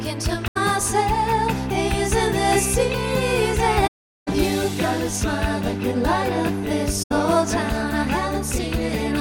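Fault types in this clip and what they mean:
AAC frame loss with muting: runs of compressed frames went missing and the decoder filled them with silence, so the overlapping transform windows fade the sound out and back in around each gap. Holes fall at 0.47 to 0.57 s, 3.87 to 4.28 s and 7.02 to 7.12 s. The short ones fit about four frames and the long one about nineteen. A spectrogram shows full-band blank columns with tapered edges, and the waveform narrows smoothly to a flat line.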